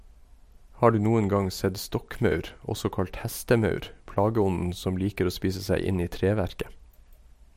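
From 1.40 to 4.76 s, after "du noen" and up to "som liker å spise", the converter's sampling clock wanders by something on the order of a few microseconds, a case of sample clock jitter. Each sample lands slightly off its proper instant, and the resulting error tracks how steeply the speech waveform is changing. It sits around 35 dB below the speech, a gritty hiss that thickens on loud, bright sounds and drops away in pauses.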